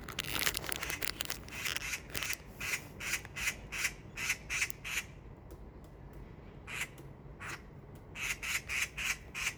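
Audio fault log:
No faults heard anywhere in these sounds.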